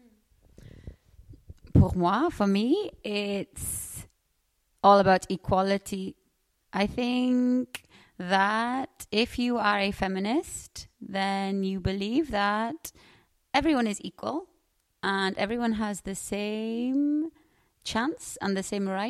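The signal carries no audible technical faults.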